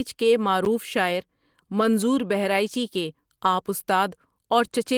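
A block of digital silence at 0.65 s cuts the speech out for about 11 ms, which fits one missed 512-sample buffer that the program did not fill in time. The abrupt drop and return, with no fade, make it heard as a tick or dip.

A lost packet rebuilt from error correction follows at 1.79 s. One 20 ms packet went missing, and the decoder played the low-bitrate copy carried in the next packet instead. There is no gap, just a brief rougher, noisier patch in the speech.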